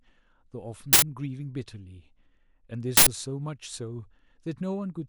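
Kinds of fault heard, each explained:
Uninitialised buffer: two short bursts of digital noise break into the speech at 0.93 s and 2.97 s, each lasting about 93 ms, which fits a 4096-sample buffer played before audio was written to it, so leftover memory sounded as samples.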